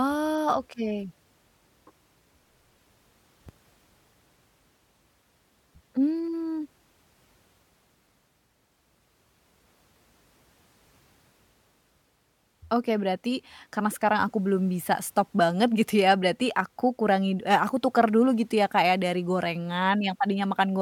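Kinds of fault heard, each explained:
No kinds of fault are heard in this speech.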